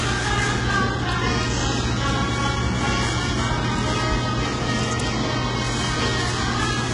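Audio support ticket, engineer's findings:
HE-AAC compression, full clip. Treble sounds synthetic and gritty, harmonics not tracking the lower band. Nothing above 11.1 kHz. Likely low-bitrate HE-AAC, around 12 kbps: upper spectrum rebuilt by band replication from copied lower bands. Heavy damage throughout.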